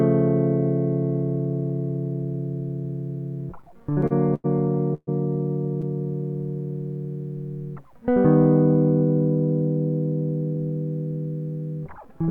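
From 3.61 to 4.46 s, the music shows repeated stalls (stutter). It catches and drags nine times, the longest hold about 95 ms, with nothing lost.

At 4.94 to 5.09 s comes a call audio freeze. The last sound hangs, fades to 30 ms of silence, then resumes, likely from late packets.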